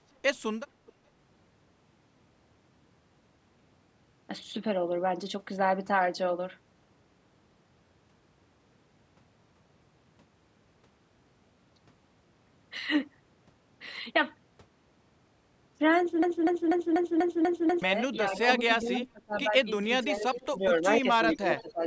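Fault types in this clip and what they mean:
echo leak: A faint delayed copy of the speech, about 0.43 to 0.44 s behind, returns in short scraps at 0.86, 18.34, 18.87, 20.35 and 21.3 s, about 15 to 30 dB down. This is likely residue an echo canceller missed. It is a later, quieter copy, not an exact repeat.
broken-record loop: From 16.23 to 17.82 s, a 0.24 s fragment plays seven times back to back, identical each pass, while the audio meant for that stretch is lost. A stalled stream or player is the likely cause. Unlike echo, it replaces the sound and does not trail it.
speech suppressed in double talk: Around 18.38 to 19.53, 20.04 to 21.06 and 21.37 to 21.83 s, the speech dips by about 20 to 25 dB in pieces while the other side talks. This is likely an echo canceller ducking both sides at once, so sound goes missing instead of being added.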